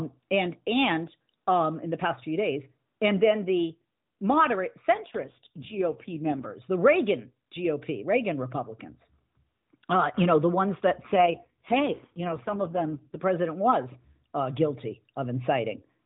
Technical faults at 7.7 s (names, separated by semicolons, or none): none